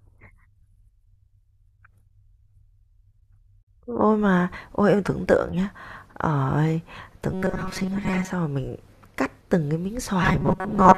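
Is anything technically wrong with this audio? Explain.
Yes. Robotic sound from repeated short buffers at 7.33–8.30 s (most of it) and 10.23–10.97 s (about half), likely from a repeated roughly 5 ms buffer, giving a rigid, metallic 188 Hz buzz.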